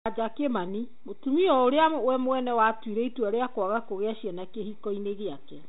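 No technical faults are audible.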